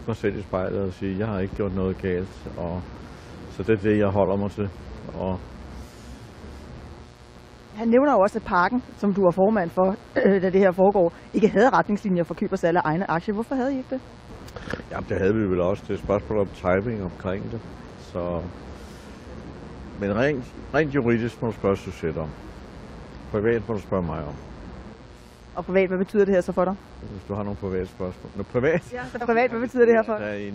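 A steady, raspy mains buzz runs under the whole clip, 60 Hz harmonics from spiky switching interference, sitting roughly 25 dB below the sound.

Frames out of order show up at 24.42–24.48 s, 27.03–27.12 s and 29.16–29.27 s, where neighbouring chunks play swapped, giving a brief garbled flutter.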